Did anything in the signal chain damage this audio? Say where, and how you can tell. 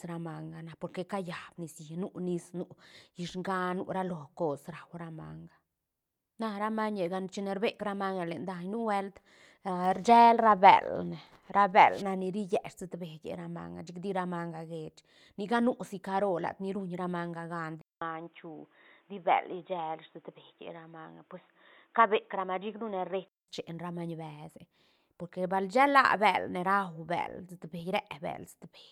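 Yes. At 17.81 s the input was likely switched to a poorer device at the driver level, such as another microphone or a headset's call profile, and it switches back at 23.48 s. A silence of about 200 ms marks the switch. Then the speech turns dull and boxy, with nothing above 3.8 kHz, a level shift of about 5 dB, and a different noise floor about 45 dB below the signal. All of this points to a different capture path.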